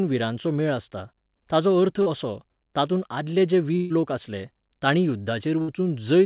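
At 2.02 to 2.08 s there is a short concealed packet loss: about 40 ms of the call never arrived, and the receiver extrapolated the preceding speech to cover it. It is heard as a brief smear. On a spectrogram the preceding sound runs on unnaturally smooth and repetitive for that stretch before rejoining the real signal.

Two bursts of packet loss follow, at 3.76 to 3.92 s (140 ms) and 5.62 to 5.70 s (60 ms). In each, several consecutive packets went missing, and the receiver stretched the last sound while lowering its level. This produces a held sound that fades, then the speech jumps ahead with that portion gone. The waveform shows a decaying patch, and the spectrogram shows frozen, fading bands ending in an abrupt resumption.

Throughout, the spectrogram is empty above 4 kHz, which fits a narrowband G.711 A-law call path at 64 kbps.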